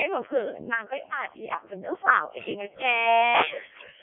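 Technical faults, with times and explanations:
Throughout: Codec 2 vocoder. The speech is synthesised from sine waves rather than passed as a waveform, so it sounds robotic and buzzy, band-limited to roughly 150 Hz–3.5 kHz with nothing above 3.6 kHz. The heavy damage fits the 0.7 kbit/s mode.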